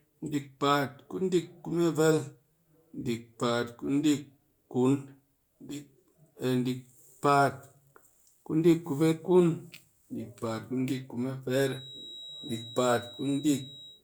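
From 11.54 s to the end at 14.03 s, a feedback whistle sits behind the speech: a thin, steady tone at 3.8 kHz, about 20 dB below the signal, swelling and fading slowly in level. This likely comes from a loudspeaker-to-microphone loop held right at the edge of feedback.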